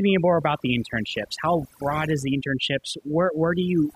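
Speech, and the whole of it has been through overdone noise removal. The denoiser was pushed too hard, so it clamps individual frequency bands down whenever they sit near its noise estimate. That leaves the gaps lower and broken up into little twinkling specks, and it strips the softer parts of the voice.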